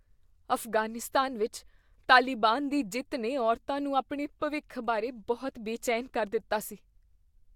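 No technical faults can be heard anywhere in the recording, and the signal holds steady throughout.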